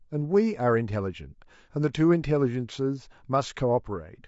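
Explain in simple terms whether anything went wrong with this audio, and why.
Throughout the speech there is a rough, grainy quality. Noise sits between the tones of the voice, and the top end sounds dull or artificial. This is likely low-delay AAC compression. It works in very short chunks, which capture pitch poorly.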